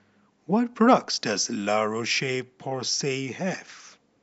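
Nothing goes wrong anywhere in this bit of speech, so there's no technical fault to point to at any moment.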